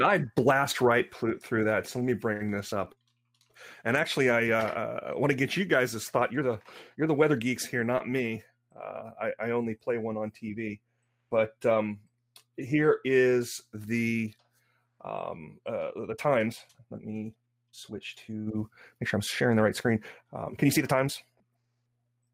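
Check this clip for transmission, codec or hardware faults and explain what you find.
There's one fault, and it sits at the tail end. From 15.86 s to the end at 22.33 s there's a time-stretched section: the pace suddenly jumps to about 1.37 times normal while the pitch stays put. That's likely software squeezing the audio to fit a length, keeping pitch steady by dropping short slices rather than just playing faster. You hear it as rushed.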